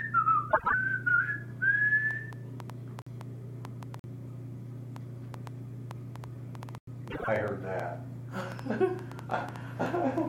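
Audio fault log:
0.49 to 0.74 s and 7.10 to 7.28 s, frames out of order. In each stretch two neighbouring runs of frames play swapped, about 78 ms and 52 ms each. That fits three and then two frames per run. The halves trade places, so the sound flutters briefly. No time goes missing.
2.11 to 10.19 s, train of clicks. About thirty sharp, similar pulses tick over the sound at roughly 4.2 per second. Their spacing is uneven. They peak around 10 dB above the sound and stay audible in quiet moments. Interference or a faulty connection is the likely cause.
3.02 to 3.07 s, 3.99 to 4.04 s and 6.78 to 6.87 s, block of digital silence. The audio cuts abruptly to silence and returns without a fade. The first two holes last about 46 ms and the third about 93 ms. That fits 2048- and 4096-sample output buffers left unfilled in time.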